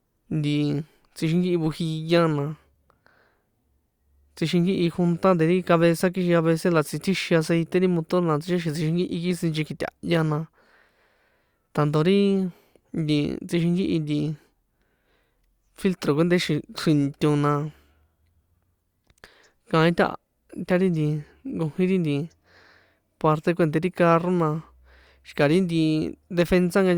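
No technical faults can be heard anywhere in the recording.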